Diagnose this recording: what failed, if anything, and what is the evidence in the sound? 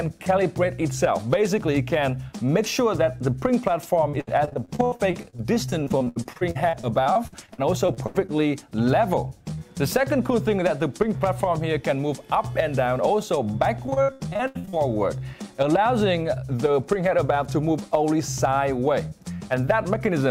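The network dropped packets, and you can hear repeated packet loss (robotic sound) in two stretches: from 4.09 to 8.31 s, then more heavily from 13.86 to 14.81 s. The sound turns choppy, with dozens of short holes, the longest around 80 ms. The receiver patched each hole by extending the last bit of audio, covering about a quarter of the first stretch and nearly half of the second, hence the robotic buzz.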